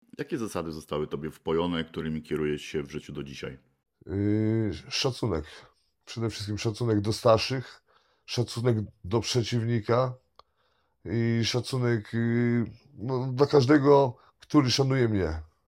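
A speech recording, and no technical faults can be heard in it. Nothing calls for a time, a cause or a fix.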